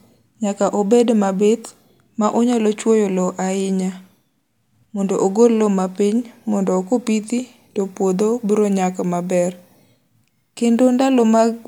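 From the start to 7.71 s the speech sounds slightly dull, with the very top of the treble softened. This is channel delay (comb filtering): one channel trails the other by roughly a single sample, so their mono sum cancels near 20 kHz.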